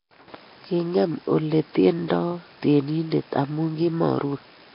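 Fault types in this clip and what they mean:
Nellymoser compression: the whole clip has a rough, hissy halo and a smeared, underwater sound with nothing above 5.3 kHz, likely from Nellymoser Asao coding at a low bitrate.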